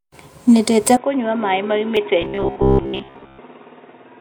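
A short speech recording whose input likely switched to a poorer device at 0.97 s, with no gap. From there to the end the level drops by about 10 dB and a faint new noise floor appears. At 1.97 s, damaged data in the compressed stream makes the decoder lose sync and jump to the next frame, leaving a brief blip. From 2.22 to 3.40 s, audio likely arrived too seldom, so the playback repeated short buffers while most of the real audio was skipped. The result is robotic sound with a rigid, metallic buzz at 66.8 Hz, which fits a buffer of about 15 ms.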